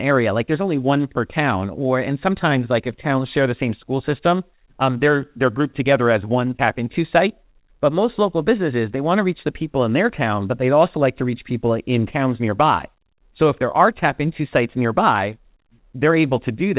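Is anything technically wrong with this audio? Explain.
Yes, the speech carries a steady timing problem, heard through a narrowband call path whose content stops at 4 kHz, which fits G.711 A-law coding.

Clock drift between sender and receiver runs through the whole clip, with the sending side's clock running roughly 4 percent fast. Samples arrive slightly quicker than the receiver plays them, so its jitter buffer keeps filling. What sets this apart from packet loss or network jitter is its one-sided, persistent nature. There are no gaps or random stalls, only a constant surplus that must be removed.

Repeated timing corrections, the receiver's response to that surplus, occur from 0.11 s to 16.55 s, with the speech effectively pushed along at 104 percent. The receiver keeps trimming short pieces to stay in step. Every edit goes the same way and they come at uneven intervals, so if they are heard at all, it is as slight hiccups or an unsteady tempo. 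Random network jitter would instead both stretch and compress, and usually leave audible gaps.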